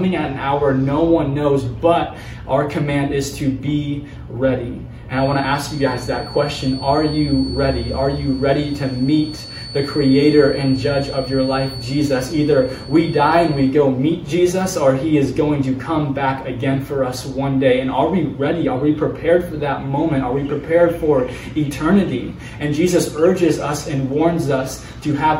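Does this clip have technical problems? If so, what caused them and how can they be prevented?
Yes. A feedback whistle runs from 5.08 s to 13.77 s. It is a thin, steady tone at 4.4 kHz, sitting about 20 dB below the main sound. Its level swells and fades slowly but it never grows. The likely cause is a loudspeaker-to-microphone loop held just at the edge of feedback. One frequency keeps ringing without running away. To prevent it, lower the monitor gain, move the microphone away from the speaker, or notch out 4.4 kHz.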